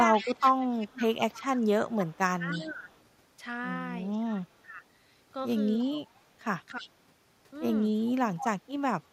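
From 0.13 to 3.04 s, a faint delayed copy of the speech trails it by 310 ms, about 15 dB below the direct sound. This echo leak likely comes from a loudspeaker at the other end whose echo canceller let its microphone pickup slip back into the call.

Overlapping that stretch, from 0.21 to 2.84 s, the speech dips in broken pieces by up to about 15 dB. Similar drops follow at 4.36 to 4.81 s and 5.81 to 5.88 s. This is speech suppressed in double talk, likely the canceller turning the talker down while both sides spoke at once.

The echo returns, weaker at about 20 dB down, from 5.9 to 6.9 s. Another dip of up to about 15 dB falls at 6.74 to 6.9 s, and a deeper one, around 20 dB, at 8.39 to 8.92 s. A last barely audible echo trace appears at 9.04 to 9.08 s.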